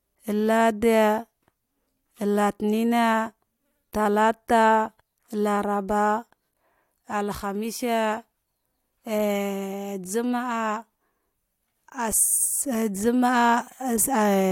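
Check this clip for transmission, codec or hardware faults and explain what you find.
Nothing audible points to a problem in the transmission path or the playback hardware, and the speech signal holds steady and continuous throughout.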